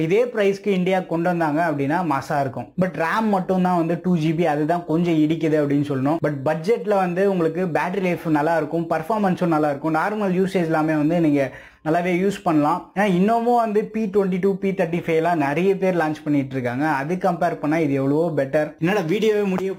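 Throughout, crude rate conversion repeats nearest samples unfiltered, which fits a 44.1 kHz to 48 kHz change, adding a gritty, inharmonic fizz roughly 30 dB below the sound.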